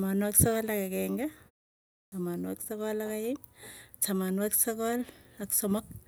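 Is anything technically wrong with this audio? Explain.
Yes. At 2.0 s, after a 0.58 s pause, there is a clipped start after a pause: the sleeping output device wakes late and swallows about 120 ms, so speech begins abruptly without its opening sounds, unlike muted pauses, where nothing is lost.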